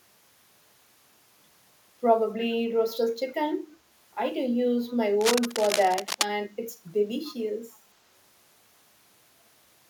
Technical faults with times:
4.89-4.97 echo leak
5.21-6.25 cable scratch noise
7.24-7.35 echo leak

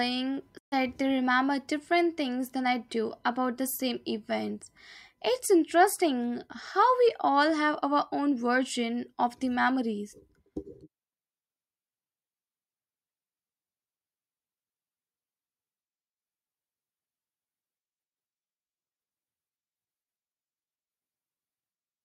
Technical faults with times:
0.57-0.74 digital broadcast dropout

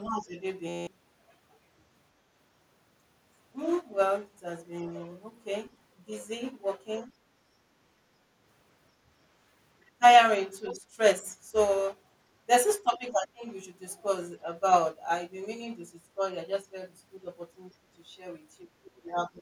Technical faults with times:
0.02-0.40 speech suppressed in double talk
0.69-0.87 system hang loop
7.07-7.11 speech suppressed in double talk
9.80-10.02 speech suppressed in double talk
10.67-10.73 other side's voice leaking through
10.71-10.86 speech suppressed in double talk
12.84-13.45 speech suppressed in double talk
18.62-19.41 speech suppressed in double talk

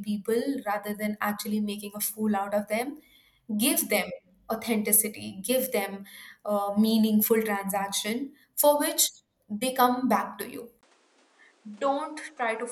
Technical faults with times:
10.81-12.71 input switched to a poorer device

